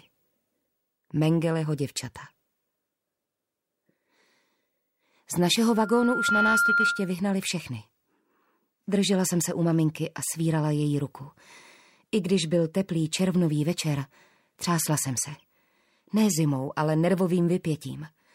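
A microphone began picking up the loudspeaker it feeds, closing a loop with gain above one at 1.4 kHz, causing loudspeaker feedback squeal from 5.68 to 7.17 s. The tone swells over roughly three quarters of a second into a piercing whistle about 5 dB above the surrounding sound.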